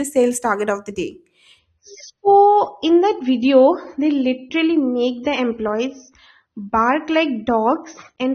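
At 1.59 s the speech abruptly loses its top end and stays degraded to the end at 8.34 s, with no gap or dropout at the switch. This is an adaptive stream at a lower bitrate: the player fell back to a leaner encoding, which sounds like AAC dropping from around 96 to around 24 kbit/s. Sibilants turn dull and swirly. On a spectrogram, energy above 6.3 kHz vanishes at a sharp vertical edge, while the waveform envelope continues unbroken.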